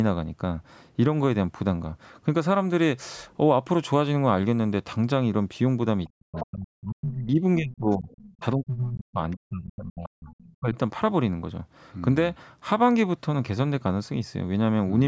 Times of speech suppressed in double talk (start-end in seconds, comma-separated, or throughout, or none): 6.13-10.78